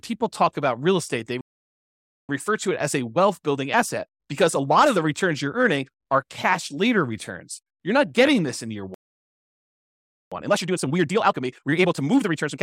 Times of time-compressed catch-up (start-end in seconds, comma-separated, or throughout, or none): 2.29-5.29, 10.32-12.62